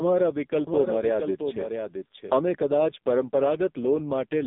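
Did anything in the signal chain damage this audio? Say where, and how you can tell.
Yes. The codec stage did it throughout: this is AMR narrowband mobile codec audio, with nothing above 3.8 kHz and a line band of roughly 200 Hz to 3.7 kHz. The speech is heavily buzzy and synthetic, which fits AMR-NB's lowest modes, around 5.15 kbps.

There's also a doubled audio track from 0.67 to 2.37 s. A full-band copy about 5 dB quieter trails by roughly 0.7 s, with no decay or room colour, and it cuts in and out abruptly. That likely comes from a slower second capture path or an edit leaving two copies overlapped.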